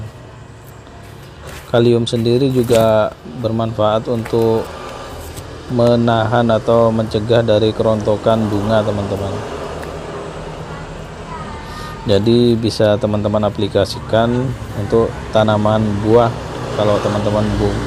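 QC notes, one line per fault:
5.87 s, repeated buffer: fresh audio missed its deadline, so the output replayed its last block once more, about 1.33 ms long, which fits a 64-sample buffer. A repeat that short is heard as a single click rather than a stutter, from the hard joins on either side.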